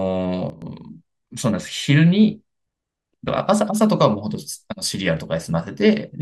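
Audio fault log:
0.50–0.62 s, sudden gain jump: the speech level drops by about 10 dB in a single step, with no fade in or out, and the background noise falls by the same amount at the same instant, so the whole signal sounds abruptly quieter rather than just the talker moving away. After 0.12 s the level steps back up just as sharply. The instant change from one sample to the next likely comes from a digital gain setting applied without a ramp.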